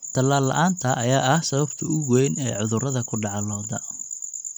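No technical faults are audible anywhere in the recording.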